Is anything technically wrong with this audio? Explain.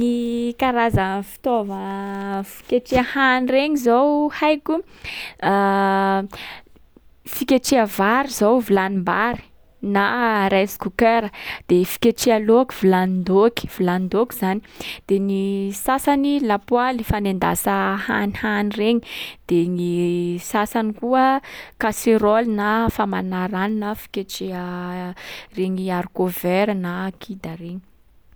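No, nothing technically wrong turns up anywhere in this speech recording.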